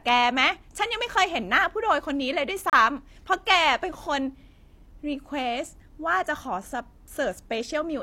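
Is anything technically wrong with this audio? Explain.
Yes. From 2.70 to 2.73 s there is a gap between stream segments: two segments' time stamps leave a 32 ms hole that the player fills with silence. It sounds like a hard-edged break, but unlike a dropout no audio is lost, and the speech resumes exactly where it stopped.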